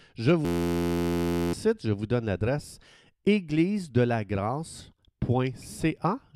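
From 0.45 to 1.53 s the speech turns into a steady 86 Hz buzz, a system hang loop replaying one 11.6 ms chunk, which fits a 512-sample buffer.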